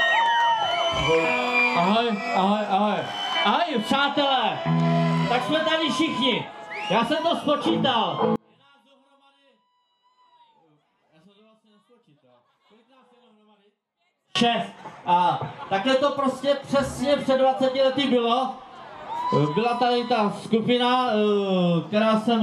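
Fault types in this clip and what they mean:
One channel inverted: from 8.36 to 14.35 s the sound drops by about 37 dB to a faint residue, likely because one stereo channel has reversed polarity, so everything common to both channels cancels when they are summed to mono.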